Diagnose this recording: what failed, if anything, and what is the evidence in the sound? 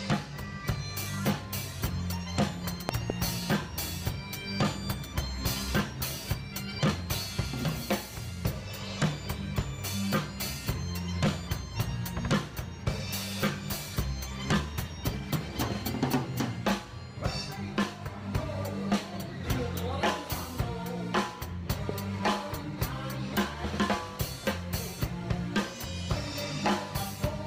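Loud pops: a double pop at 2.89–3.12 s, about 25 dB over the signal, then single ones near 17.83 and 21.89 s, likely analogue voltage spikes from a plug or switch.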